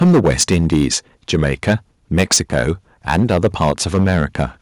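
From 0.01 to 0.86 s the speech shows microphone overload: peaks run about 10 dB past the converter's ceiling and roughly a tenth of samples are flattened, giving a harsh, crackling edge to loud syllables. The likely cause is input gain set too high.

At 0.03 s the microphone volume steps down by 2 dB in one move, likely the call software reacting to that clipping. The speech and background drop slightly and abruptly together.

Overload returns at 1.33 to 1.74 s, 2.13 to 2.70 s and 3.08 to 4.41 s. The peaks exceed the ceiling by about 7, 11 and 8 dB, with a few percent of samples clipped in each stretch.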